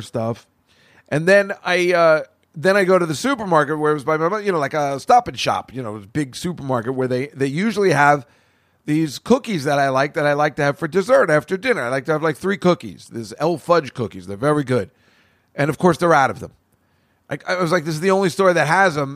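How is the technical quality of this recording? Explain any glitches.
The recorded speech signal holds steady throughout, with no technical glitches to report.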